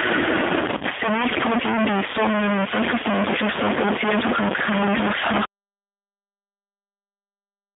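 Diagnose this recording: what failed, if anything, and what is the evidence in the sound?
Throughout the clip there is a gritty distortion riding on the speech, and the pauses are not quiet but filled with a constant noise floor. This is likely a stuck bit at the converter or in sample-format handling: one bit held at a fixed value shifts about half the samples by that bit's weight. On a waveform, silent stretches show a fuzzy band instead of a flat line. On a spectrogram, broadband hash persists between phrases.

The speech also has the rough, slightly synthetic character of the G.729 codec (G.729A at 8 kbit/s), heard at the call-processing and codec stage. The line is confined to roughly 200 Hz to 3.6 kHz, so the low end is thin and sibilants are dull. On a spectrogram, energy stops sharply at about 3.6 kHz with nothing above. The codec's filter and pulse model is plainly audible as roughness and smearing.

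From 0.78 to 0.84 s, a network fault shows up as VoIP packet loss concealed by the speech codec. About 30 ms of audio went missing, which fits a single lost packet. The decoder stretched its last pitch and filter into a fading continuation, and the speech stays weak or distorted for a moment afterward while the codec state recovers. On a spectrogram, the harmonics there turn unnaturally steady and smooth before fading.

At 5.45 s the audio cuts out abruptly in mid-flow, and an audio dropout to silence runs to the end of the clip. This is likely a lost input or link upstream of the recorder, which kept writing silence. On a waveform, the trace collapses to a flat line. On a spectrogram, everything after that point is blank.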